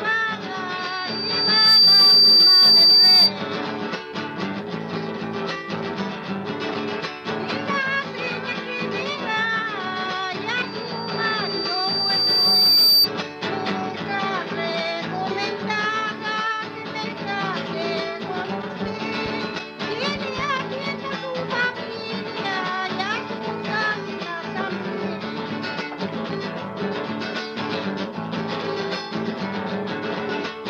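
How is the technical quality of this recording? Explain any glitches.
The recording has two bursts of loudspeaker feedback squeal, from 0.78 to 3.33 s and from 10.62 to 13.09 s. Both times the mic picks up its own speaker and a 4.7 kHz tone runs away, swelling over a second or two until it sits well above the sound.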